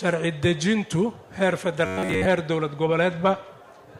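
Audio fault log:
1.86 to 2.25 s, robotic sound from repeated short buffers: the sound turns into a rigid, metallic buzz fixed at about 93.8 Hz that only loosely follows the material around it. The likely cause is new audio arriving too slowly, with playback filling the gaps by looping a stretch of roughly 10.7 ms, which fits that buzz frequency. Around seven tenths of this span is repeated material, and the original audio underneath is skipped.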